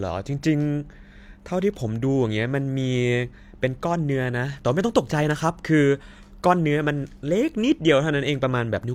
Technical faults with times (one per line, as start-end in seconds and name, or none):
none